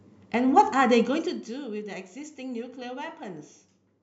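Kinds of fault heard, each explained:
Nothing stood out on listening to this speech clip.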